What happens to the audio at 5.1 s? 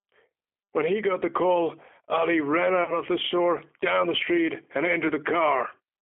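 At 5.07 to 5.11 s, a single 20 ms stretch of the G.729 stream fails to arrive, a VoIP packet loss concealed by the speech codec. The decoder fills the gap by repeating its last pitch and vocal-tract filter at falling gain, so the speech briefly smears into a buzzy tone or coloured noise that fades, and stays weak for a moment after the stream resumes.

Underneath, the G.729 codec itself is at work at 8 kbit/s, rebuilding speech from a filter and a few pulses per frame within a roughly 250 Hz to 3.5 kHz line band. That leaves the voice plainly rough and synthetic, with nothing above that narrow band.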